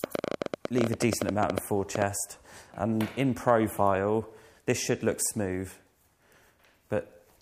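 From 0.04 to 2.03 s, a train of clicks runs over the sound. About 30 sharp pulses arrive at around 12 per second, spaced unevenly. They stand roughly 20 dB above the audio, heard as ticking. Interference from nearby equipment is the likely cause.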